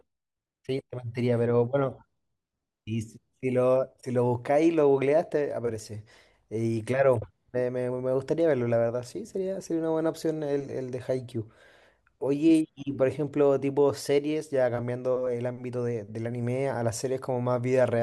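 No technical faults can be heard anywhere in the recording.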